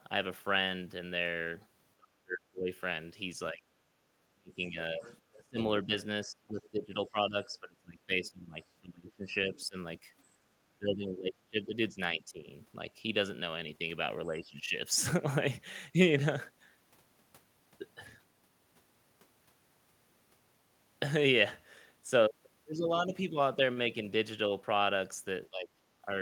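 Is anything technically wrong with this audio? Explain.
Yes. The speech clip has three kinds of echo-canceller fault.

Speech suppressed in double talk: From 1.97 to 12.51 s the talker's voice repeatedly dips and breaks up, adding up to around five seconds of lost level, at worst roughly 30 dB down. Shorter dips follow at 14.27–14.74 s (around 10 dB) and 25.5–25.83 s (around 15 dB). The likely cause is that both ends spoke at once, and the canceller, unable to tell the local voice from loudspeaker echo, attenuated everything.

Background gated by the echo canceller: Between 3.90 and 4.06 s the room sound briefly sinks by about 6 dB for roughly 150 ms, then comes back. The canceller clamped the microphone down while the loudspeaker was active and released it once playback eased. The gap is short and shallow, heard as a momentary dip in the ambience.

Other side's voice leaking through: A faint second voice surfaces from 5.02 to 5.44 s, roughly 25 dB below the main speech, and again from 8.25 to 10.24 s, roughly 30 dB below. 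This is likely far-end audio from the loudspeaker that the canceller failed to fully subtract from the microphone signal, leaving a quiet residue underneath the talker.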